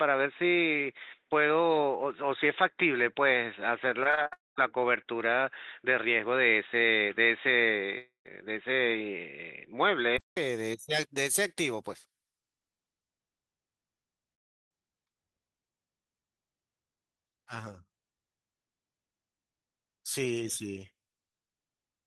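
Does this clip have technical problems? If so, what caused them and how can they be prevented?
Yes. From the start until about 10.37 s the speech sounds dull and boxy, with nothing above 3.8 kHz. At 10.37 s there's a 200 ms silence, then it clears and the level changes by about 5 dB. That's most likely an input switched to a poorer device, such as a headset's call profile. Pinning the microphone choice in the app and disabling automatic device switching would prevent it.

Between 4.03 and 4.33 s there's repeated packet loss, giving a choppy, robotic sound. Five short holes, the longest 38 ms, were patched by stretching the previous sound, so about 39% of that span is synthetic filler. A steadier connection and a larger jitter buffer would help.

There are also three gaps at 4.33 to 4.58 s, 7.98 to 8.31 s and 14.34 to 14.72 s. Each starts with a brief fading buzz, then silence, and audio resumes with a chunk missing. 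The last gap is almost entirely silent. A long network dropout is the likely cause. Wired connections or better Wi-Fi coverage would prevent these.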